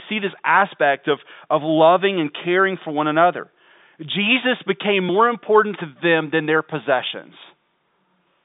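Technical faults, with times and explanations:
No faults detected; the speech sits in a telephone band of roughly 150 Hz to 3.7 kHz with nothing above 3.8 kHz, consistent with the G.711 telephone coding on the line working as intended.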